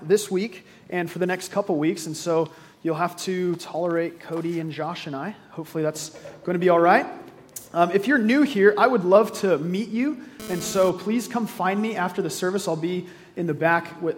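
GSM phone buzz appears from 10.40 to 10.90 s, a hard, raspy tone at about 217 Hz carrying a dense stack of harmonics, sitting roughly 14 dB below the sound and bearing no relation to it. A nearby 2G handset sends radio bursts 217 times per second, and something in the audio chain rectifies those pulses into audible current. Here the buzz lasts only half a second, which fits a phone briefly exchanging data rather than holding a call.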